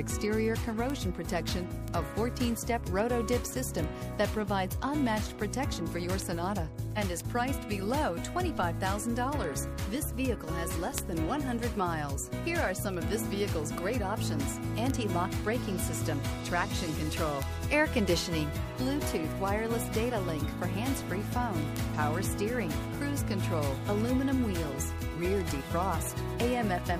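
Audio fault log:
0.20–26.95 s word clock ticks: a sharp tick recurs roughly every 0.15 s, some two hundred in all, with uneven strength from one tick to the next. The receiving device is running on its own clock rather than locked to the sender, which points to a mismatch of around 150 ppm. Each slip misreads a few samples and drops or repeats one. The steady, metronome-like spacing sets it apart from random clicks or dropouts.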